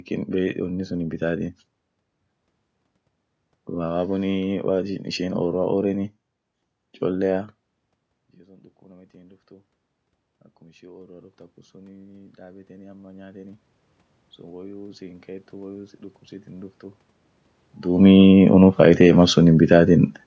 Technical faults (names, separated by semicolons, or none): automatic gain rising